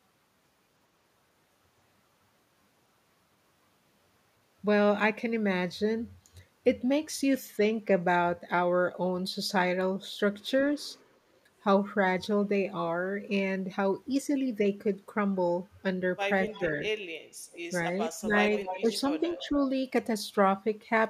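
At 16.47 s the speech dips by about 10 dB for roughly 0.15 s. This is speech suppressed in double talk. Both sides likely spoke at once, and the echo canceller turned everything down. Inside that dip, at 16.5 s, comes an echo leak. A faint copy of the voice returns 0.28 s late, about 20 dB down. The far end's canceller likely let some loudspeaker sound through. A fainter scrap, about 30 dB down, follows at 17.52 s. At 18.16 s the speech drops again, this time by about 20 dB for 0.2 s. From 18.55 to 19.5 s a longer echo runs, only about 10 dB below the speech. During it, shallow dips of about 5 dB hit at 18.81 s and from 19.19 to 19.58 s.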